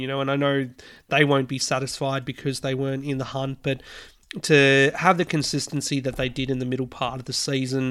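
Nothing here is technically wrong with this bit of speech, so there are no times or causes to point to.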